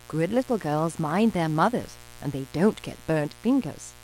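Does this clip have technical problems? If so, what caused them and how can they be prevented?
Yes. A steady, raspy buzz runs underneath the speech for the whole clip, sitting well below the voice. This is mains buzz at 60 Hz: sharp switching spikes from a dimmer, rectifier or poorly shielded cable leak into the signal path twice per mains cycle, so the hum carries a dense stack of harmonics reaching into the kilohertz range, which gives it that edgy, buzzing texture rather than a smooth hum. Keep microphone cables shielded and routed away from dimmers and power supplies, and use balanced connections with a sound ground.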